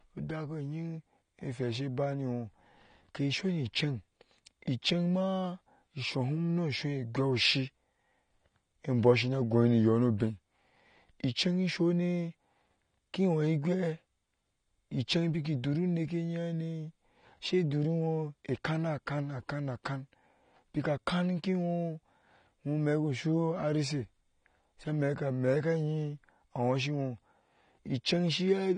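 The whole clip of speech is dull and smeared, with a fizzy, warbling edge on sibilants and nothing above 9.7 kHz. That's likely AAC compression, the codec dropping high bands and coarsely quantising the rest, which fits a low bitrate around 32 kbps.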